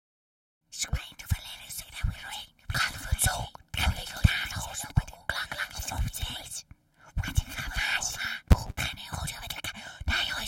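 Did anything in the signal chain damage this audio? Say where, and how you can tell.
Yes. A filtering stage is being restarted on every block: it discards its internal state at each block boundary and runs each new block as though the input before it had been silent. From 7.84 to 8.93 s this produces a small transient at the start of each block, heard as a buzz at 200 Hz that rises and falls with the level of the sound. That rate points to processing blocks of about 5 ms.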